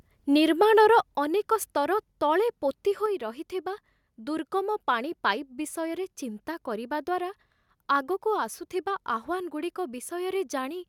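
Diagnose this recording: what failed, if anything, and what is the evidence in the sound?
Microphone volume stepped down, at the call-processing stage: level drops abruptly by about 5 dB at 1.02 s before "ଅନେକ ସ୍ତର ତଳେ ପୋତି", about 1 dB at 2.04 s and about 2 dB at 3.06 s. The background falls along with the speech, in clean steps rather than a ramp, which points to the software likely lowering the device input volume, not the talker moving away.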